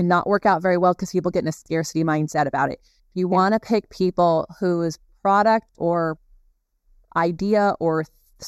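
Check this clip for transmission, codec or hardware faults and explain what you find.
One fault runs through the whole speech clip: channel delay (comb filtering). One channel trails the other by a fraction of a millisecond, and summing them to mono cancels shared content at evenly spaced frequencies, the first near 3 kHz. The speech sounds hollow and phasey. Unlike a low-pass roll-off, the notches repeat upward, and unlike flanging they never sweep.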